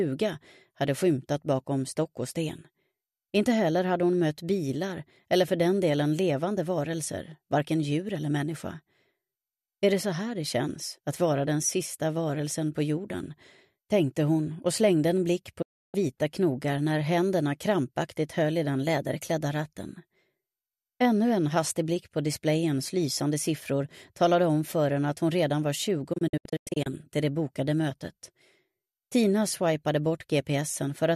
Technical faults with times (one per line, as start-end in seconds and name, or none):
15.62-15.95 digital broadcast dropout
26.13-26.87 digital broadcast dropout